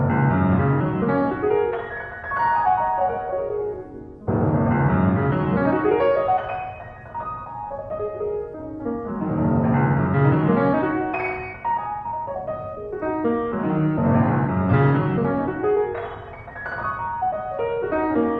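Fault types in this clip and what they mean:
No faults detected in this recording of sounds.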